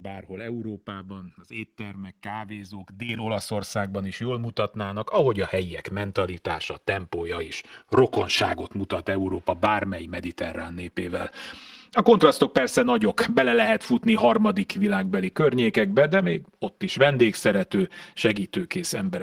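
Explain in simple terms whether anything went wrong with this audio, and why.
Two things went wrong. The first is channels drifting apart. The left and right sides were recorded by devices keeping slightly different time. Their gap grows slowly to about 7 milliseconds by the end. Mixed together, this gives a slow, swirling flanging sound throughout.

The second is the microphone volume stepped up. The calling software judged the microphone too quiet and turned it up suddenly. It happens twice, at 3.09 s just after "az éttermek kávézók", and at 5.19 s between "is jól mutatnának" and "a helyiek mentalitása tempója". Both the voice and the background jump louder together.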